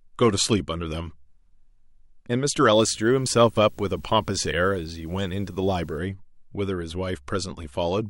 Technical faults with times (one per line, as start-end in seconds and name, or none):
2.74-5.98 video or display buzz